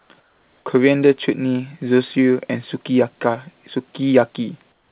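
Comfort noise in place of the background appears in this speech clip at 0.0–0.1 s, 0.2–0.66 s and 4.72 s to the end: the quiet background turns steady and featureless, about 3–5 dB lower, most likely because the sender paused transmission during silence and the receiver synthesised filler noise. Nothing is heard above 4 kHz, which fits a narrowband G.711 call.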